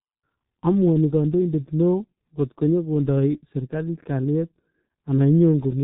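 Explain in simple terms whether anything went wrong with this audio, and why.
Yes, something went wrong: the whole speech clip has been through a G.723.1 codec, an old internet-phone squeezer. It throws away everything above about 3.9 kHz and rebuilds the voice in coarse chunks, so it sounds muffled and hoarse, with smeared consonants start to finish.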